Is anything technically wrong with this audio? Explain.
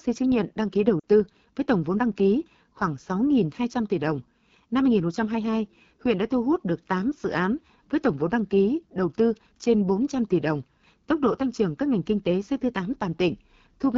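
Yes, there are two faults in this speech.

AMR wideband (HD Voice) codec, throughout: the whole clip has the plainly audible rough, raspy texture of AMR-WB at one of its two lowest rates, which fits the 8.85 kbit/s mode. The codec rebuilds speech below 6.4 kHz from a pulse-excited model of the vocal tract and adds shaped noise from 6.4 to 7 kHz. At this rate the pulse excitation is too coarse, so the voice sounds grainy and buzzy.

Lost AMR speech frames, 1.00 to 1.05 s: radio errors corrupted the frames here, and the decoder filled the gap by repeating the last good pitch and vocal tract settings at falling gain. The concealed stretch is about 40 ms long, which fits two lost 20 ms frames. It is heard as a brief dip, and the speech comes back weak or rough for a moment.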